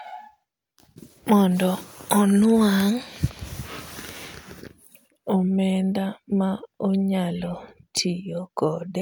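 Speech with a drift correction step from 3.50 to 5.47 s: speed drops 5.3% and pitch falls nearly a semitone, likely a clock-matching rate change, then snaps back, unlike gradual wow.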